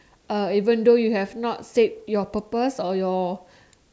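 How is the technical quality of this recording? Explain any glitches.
No technical glitches can be heard anywhere in the recording.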